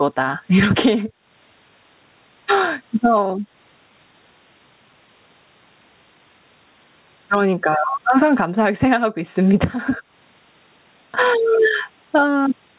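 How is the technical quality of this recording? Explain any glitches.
Gain pumping runs through the whole recording, audible against the telephone-band sound of a call path that stops at 4 kHz, which fits a G.711 codec. Throughout the clip the level swings by about 15 dB. The likely cause is a microphone gain set far too high, with a fast limiter clamping down on every peak. Loud and quiet passages sit squashed together.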